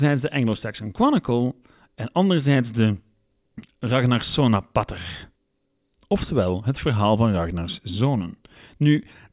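No audible technical faults in the speech recording; nothing to flag.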